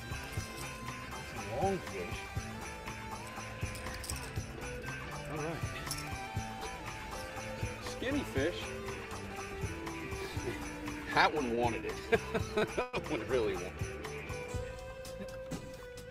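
At 11.55 s and again from 12.58 to 12.64 s there is a short stall from a late packet. Each time a packet missed its playout slot, the jitter buffer ran dry, and the receiver held the last sound for about 17 ms and then 33 ms before carrying on from the same point. Nothing is lost, but the sound briefly hangs with a faint buzz. On a spectrogram the harmonics run flat and smeared for that instant, and the waveform shows a repeated cycle.

From 12.82 to 12.95 s a call audio freeze follows. The sound locks onto its last moment for about 116 ms, turning into a fading buzzy hiss that never drops to silence, before resuming exactly where it stopped. This is likely because packets were held up in transit, leaving the receiver to synthesise filler. A spectrogram shows a smooth, horizontally stretched band, and the waveform shows a decaying stretch of near-identical periods.

From 15.26 to 16.02 s a jitter buffer speed-up plays the audio at about 112% of normal rate while the pitch stays the same. 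After the earlier delays the buffer was too full, so the receiver trimmed out many pitch-period-sized slices, roughly a tenth of a second in all, and the sound feels rushed. On a spectrogram the events sit closer together in time with unchanged harmonic spacing, and the waveform shows small splice points between periods.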